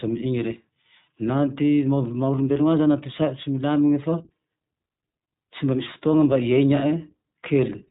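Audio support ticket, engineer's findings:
Throughout: band-limited speech, nothing above 3.8 kHz, rough and slightly synthetic texture, plainly audible. Probable component: iLBC codec, narrowband, consistent with its 15.2 kbps, 20 ms frame mode. Each frame's excitation coded independently.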